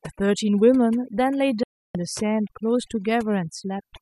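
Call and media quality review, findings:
Overdone noise removal, whole clip: background squashed down with twinkly specks; the denoiser is gating bands near its noise estimate and eating quiet speech.

Digital broadcast dropout, 1.63 to 1.95 s: speech snaps out with a roughly 3 ms fade, silent about 0.31 s, then returns. Receiver muted on bad frames, and that audio's gone.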